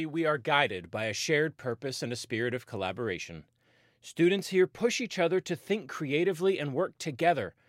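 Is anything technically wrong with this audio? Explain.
No, nothing technically wrong can be heard in this audio, and the signal holds steady throughout without any audible defect.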